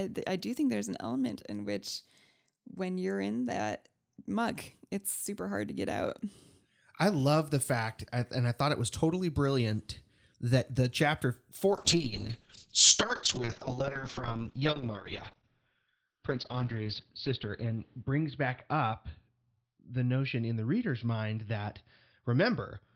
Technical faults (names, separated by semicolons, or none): call bitrate drop